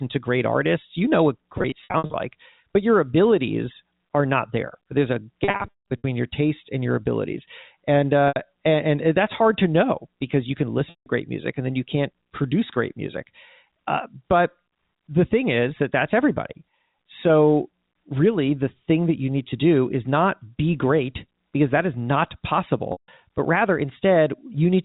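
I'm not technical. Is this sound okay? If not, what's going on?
No. At 1.58, 5.44, 8.28, 10.9 and 22.92 seconds, the speech briefly sticks on a buzzy, held sound or drops out, most noticeably from 5.44 to 6.04 s. This is packet loss with pitch repetition: small pieces of the call went missing, and the phone patched each gap by repeating the last snippet of voice.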